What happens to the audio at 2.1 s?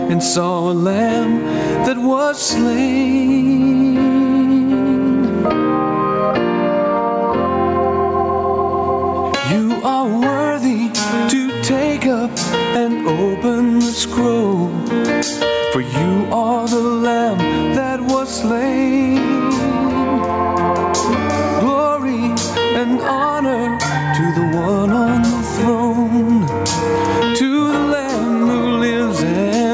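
At 2.1 s, as throughout the clip, gain pumping is heard: the gain swings by around 20 dB, squashing loud and soft parts closer in level, likely from a fast limiter reacting to excessive input gain.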